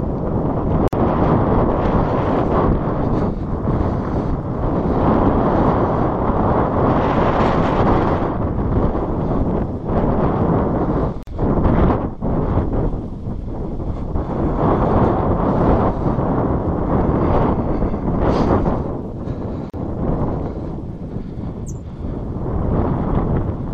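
The audio has a gap at a join of encoded pieces three times: 0.88 s (50 ms), 11.23 s (45 ms) and 19.70 s (36 ms). Separately encoded sections kept their encoder start delay and end padding. Unlike a dropout, the sound resumes exactly where it stopped, with codec-softened edges.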